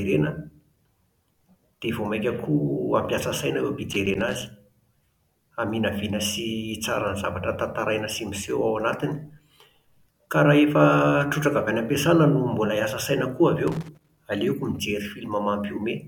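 After "saina eo" (3.91 to 4.42 s) and "hiasa saina koa avy" (13.68 to 14.17 s), loose connector crackle: an intermittent contact chops the signal into irregular scratchy bursts, unlike steady clipping distortion.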